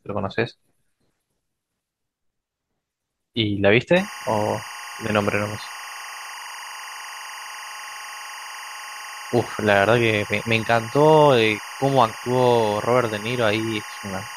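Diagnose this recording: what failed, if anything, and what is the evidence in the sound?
Timecode bleed in the analogue wiring: from 3.96 s to the end, a steady chirping warble sits roughly 15 dB below the speech, alternating near 1 and 2 kHz. Linear timecode's square wave is leaking from an adjacent track or cable, and its cadence fits 23.976 fps code.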